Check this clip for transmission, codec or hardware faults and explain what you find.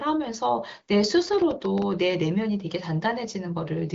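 One fault is present: processor overload crackle from 1.33 to 1.82 s. Several very short buffers, under a millisecond each, missed their deadlines and replayed stale audio, causing gritty tearing crackle. The AMR wideband (HD Voice) path shows faint or no coding damage, with content stopping near 7.5 kHz.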